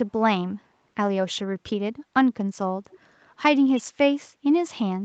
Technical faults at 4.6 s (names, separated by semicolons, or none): none